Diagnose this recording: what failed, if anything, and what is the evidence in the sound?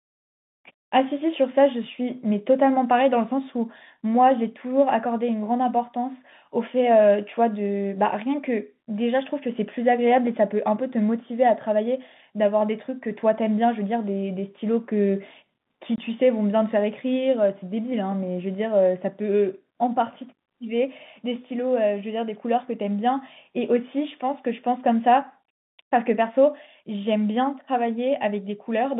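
The failure is at the network stage: packet loss filled with silence. At 15.96 to 15.98 s the speech drops out completely for 20 ms, which fits a single lost 20 ms packet. The receiver inserted digital silence instead of concealing the gap, so the signal is cut abruptly at both edges. The G.711 telephone coding underneath keeps the expected narrow line band of about 150 Hz to 3.6 kHz.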